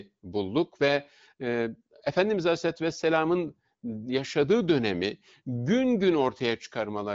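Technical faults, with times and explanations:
The speech comes through the AMR wideband (HD Voice) codec at a rate that sounds like its upper range, around 18.25 kbit/s, with the band ending near 7.7 kHz and no audible technical fault.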